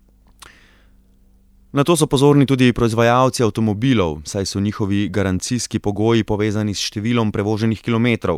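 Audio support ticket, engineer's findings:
Listened in full; nothing stood out, no audible issue to report.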